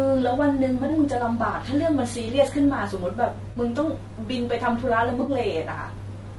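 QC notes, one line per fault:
Throughout: low-delay AAC compression. The speech sounds rough and grainy, with noise filling the gaps between harmonics and a thin, synthetic-sounding top band. This likely comes from AAC-ELD at a low bitrate around 32 kbps. On a spectrogram, harmonics look blurred and the upper band looks patchy.
0.85–0.90 s, 3.51–3.57 s, 5.21–5.31 s: AAC frame loss with concealment. Each gap, about 40, 40 and 60 ms long, becomes a brief smeared, noisy patch where the decoder reused the last good spectrum. On a spectrogram, these show as short blocks with the harmonic lines lost to diffuse noise.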